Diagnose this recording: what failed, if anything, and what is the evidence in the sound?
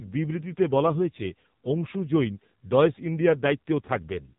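The failure is at the codec stage: AMR narrowband mobile codec damage runs through the whole clip. Nothing passes above about 3.8 kHz. The speech sounds heavily buzzy and synthetic, which fits a low AMR-NB mode near 5.9 kbps. Few pulses must model each frame.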